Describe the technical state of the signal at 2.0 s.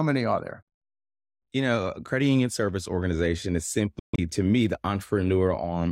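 At 2.0 s the speech is intact, with no audible technical fault at that moment.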